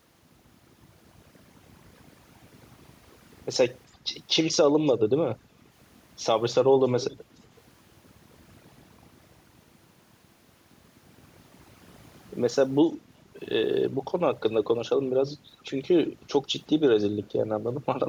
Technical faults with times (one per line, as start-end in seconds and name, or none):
0.00-18.09 overdone noise removal
6.99-7.18 echo leak
7.56-7.61 echo leak